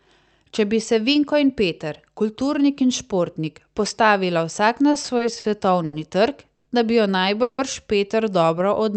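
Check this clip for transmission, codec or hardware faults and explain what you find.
Several jitter-buffer faults appear in the second half of the speech, all stretching or pausing the audio rather than dropping any of it.

From 4.91 to 5.46 s, just after "in športnik postavila vsak", the speech drags and hiccups four times. This is repeated stalls (stutter): packets kept arriving late, the buffer ran dry, and the receiver extended the last sound each time, about 110 ms in all, the longest gap 50 ms.

At 5.85 to 5.95 s a sound hangs on for roughly 80 ms too long, with a faint buzz or dip. This is a short stall from a late packet. One packet missed its slot, the receiver stretched what it had, then resumed exactly where it left off.

At 6.55 to 6.68 s, and again at 7.42 to 7.60 s just after "bi jo", the audio freezes into a held, fading buzz or hiss for about 110 ms and then 160 ms, the first ending in a brief 10 ms silence. 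These are call audio freezes, likely from packets held up in transit. The receiver padded the wait, and the speech continues from where it stopped, now later.

From 8.59 s to the end the speech runs at about 92% speed with unchanged pitch, sounds drawn out by some 35 ms. This is a jitter buffer slow-down: the receiver repeated single pitch periods or bits of pauses to rebuild its reserve.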